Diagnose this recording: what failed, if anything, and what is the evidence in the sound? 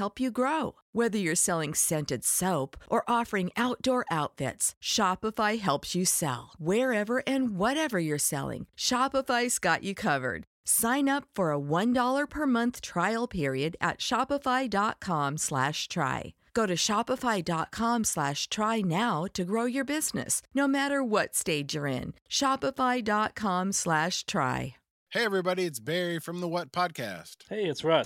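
Nothing in the recording stood out as a fault on listening.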